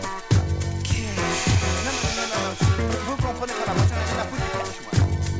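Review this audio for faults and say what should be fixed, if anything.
Resampler restarted on every block, from 1.38 s to the end: a steady 50 Hz buzz rides on the sound and is present only while there is signal. The downsampling, which fits a 44.1 kHz to 16 kHz conversion, was run afresh on each 20 ms block, so the filter saw silence or the wrong samples at every block edge and left a small error there fifty times a second. To prevent it, keep the resampler's state running across blocks instead of resetting it.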